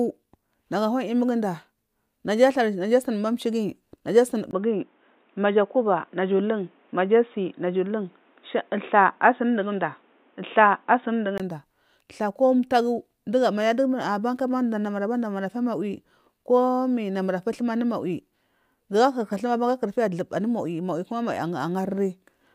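Right after "naja asuni", at 4.51 s, a 20 ms gap opens and the speech turns dull and boxy, with nothing above 3.8 kHz, a level shift of about 5 dB and faint new background noise until 11.4 s. The likely cause is an input switched to a poorer device.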